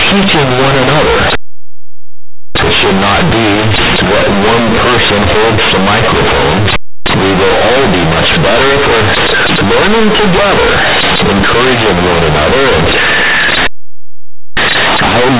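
From start to finish the speech is companded audio read as linear: A-law bytes are played directly as linear 8-bit samples instead of being expanded. Each sign change swings the output across roughly half its range, so soft and loud passages land at the same crushing level, with harsh buzzy distortion and heavy noise in the pauses. Unlike overload clipping, the quiet moments get louder too, while the band still stops at 4 kHz, as the 8 kHz telephone coding underneath sets it.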